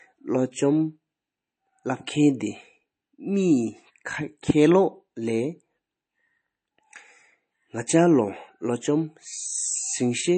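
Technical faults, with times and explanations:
Throughout, MP3 compression damage is plainly audible in the speech. Nothing is present above 8.3 kHz, so the top end sounds dull and closed off. Sibilants lose their sparkle and take on a watery, swirly edge. This is likely an MP3 encoder running short of bits. It cut the treble at a fixed frequency and dropped weak spectral detail, which then flickers between frames. The depth of damage fits a bitrate around 32 kbps.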